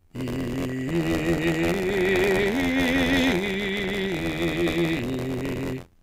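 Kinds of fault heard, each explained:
Buffer tearing: the writing program and the playback hardware have slipped so they cross inside each period, leaving roughly a sixth of every buffer holding music from about 50 ms earlier. The hard joins make a steady robotic buzz at 86.1 Hz, which fits a 512-sample buffer.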